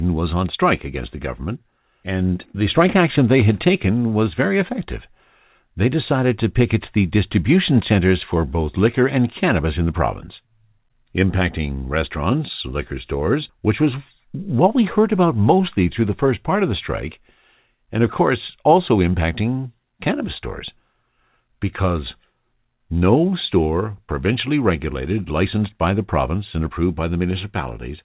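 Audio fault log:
No fault to log for this speech, which comes over a G.711 mu-law call path with nothing above 4 kHz.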